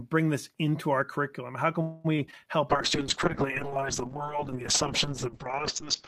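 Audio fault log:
1.81–2.06 s, call audio freeze: Packets were likely held up in transit and the jitter buffer ran dry. The receiver stretched the last sound into a fading buzz or hiss for about 230 ms. The audio then resumes where it stopped, so a pause is inserted but nothing is lost.
2.16–2.20 s, 2.26–2.29 s, 2.31–2.34 s, short concealed packet loss: About 20 ms of audio missed the decoder each time. The receiver patched each hole by extending the preceding sound and blending back in. The result is three quick smears or wobbles in close succession.
2.71 s to the end, call bitrate drop: The bandwidth estimate collapsed, and the encoder fell from 32 to 6 kbps. Its audio bandwidth narrowed from 20 kHz to 8 kHz. Coarser coding leaves the sound rough, watery and muffled, bottoming out for about 2.4 s.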